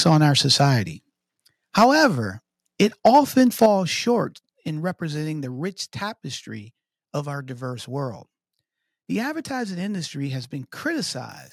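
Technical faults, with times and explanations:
0.05–0.24 s, 0.6–0.64 s, 1.77–2.05 s, 2.8–3.19 s, 3.62–3.66 s, microphone overload: peaks clip harshly, up to about 5 dB over, likely from input gain set too high for the converter.
1.84 s, 3.66 s, 4.68 s, microphone volume stepped down: level drops abruptly by about 2, 6 and 3 dB, the last just before "representing the rich tapestry", likely automatic input-gain reduction reacting to clipping.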